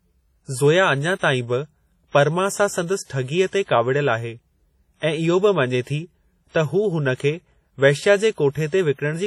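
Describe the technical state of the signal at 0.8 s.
At 0.8 s the speech carries heavy WMA compression damage, present across the whole clip. The long transform blocks smear quantisation noise over tens of milliseconds and weak detail drops out, which fits a low bitrate around 32 kbps, likely from WMA 1. It sounds ringing and washy, with hiss pumping along with the signal.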